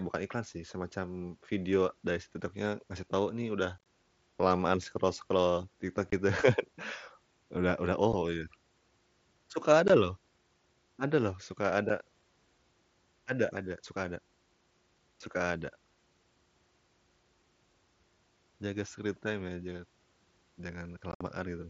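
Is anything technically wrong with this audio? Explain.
Yes, the speech drops out in short, hard-edged holes, a brief chopped gap at 3.78 s just after "ngasih tahu nih udah", then at 6.10 to 6.13 s, 8.13 s, 9.88 s and 11.89 s, and a rougher, crackly stretch at 21.12 to 21.21 s. This is unconcealed Bluetooth headset packet loss on the wideband mSBC link. Voice packets between headset and phone, each about 7.5 ms long, were lost and nothing filled the gaps. The longest run of silence lasts about 60 ms.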